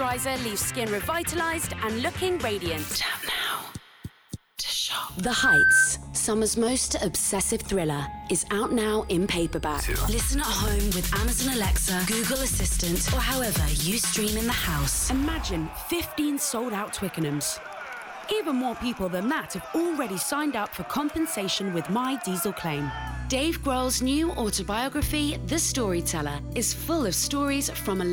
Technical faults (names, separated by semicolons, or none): loudspeaker feedback squeal